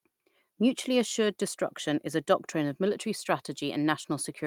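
No faults detected anywhere in this speech recording.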